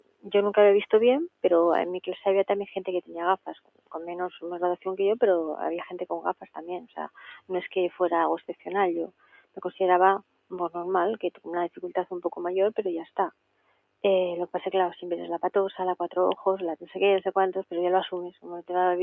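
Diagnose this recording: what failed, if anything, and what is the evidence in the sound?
Call processing is the culprit: a speech-tuned noise suppressor was left running on non-speech material. It treats steady tones, ambience and decay as noise, so the level pumps and thins throughout, with gain swinging by roughly 15 dB as attacks pass and sustained parts sink.

Sound cut by the noise suppressor shows as distinct dips at 0.0–0.31, 1.29–1.44, 3.02–4.86, 5.92–10.52, 11.31–12.32, 13.05–14.04 and 18.31–18.46 s, bottoming out about 20–21 dB down. Sustained and fading passages get clamped hardest there, with tails chopped short.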